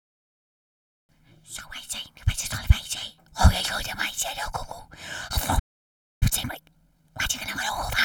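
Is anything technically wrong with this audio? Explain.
Yes. There are two related faults.

At 5.59 s there is a playback stall. The sound cuts off abruptly and stays silent for about 0.62 s, until 6.23 s. The likely cause is that the player ran dry of data or its thread was held up.

From 6.23 s to the end at 8.05 s comes time-compressed catch-up. The player works off the backlog by dropping small slices and cross-fading the joins. The sound runs 1.25 times fast at its normal pitch.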